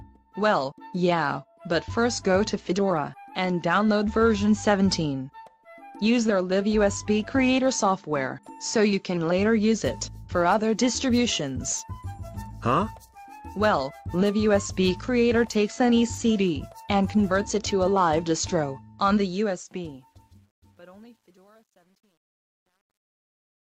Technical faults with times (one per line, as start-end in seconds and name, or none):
19.20-23.68 truncation distortion on a fade